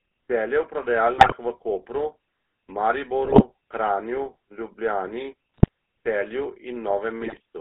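From start to finish the speech carries the GSM full-rate codec's buzzy, gravelly roughness. The vocal tract model is driven by a coarse pulse excitation, which fits a 13 kbps full-rate link, and the sound is confined to roughly 250 Hz to 3.5 kHz. The texture is constant, unlike the brief bursts that follow.

GSM bit errors break in at 1.18–1.34 s, 3.24–3.44 s, 5.54–5.68 s and 7.21–7.40 s, each lasting under a quarter second. Corrupted filter, pitch and gain values make the voice squawk, pop and gargle. The sound stays present but distorted, so this is not the silence or repeated audio of packet loss.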